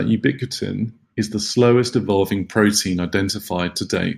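From 2.1 s to the end of the clip, the speech shows pre-emphasis left on. The treble lift matches a 75 µs FM curve, and the complementary de-emphasis cut was never applied, so high frequencies stay raised, by about 13 dB at 10 kHz relative to 1 kHz. The result is a thin, overly bright tone with exaggerated sibilance.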